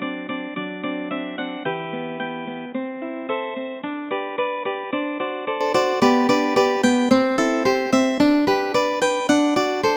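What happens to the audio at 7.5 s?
Nothing goes wrong at 7.5 s; the audio carries on intact through that moment with no dropout, click or distortion.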